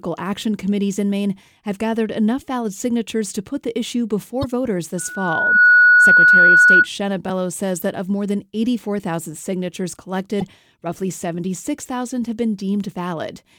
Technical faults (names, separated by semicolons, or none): damaged data in a compressed stream; loudspeaker feedback squeal